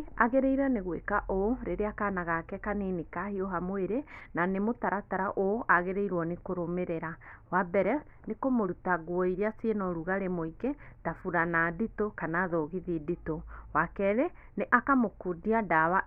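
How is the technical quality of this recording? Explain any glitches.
No glitches can be heard anywhere in this recording.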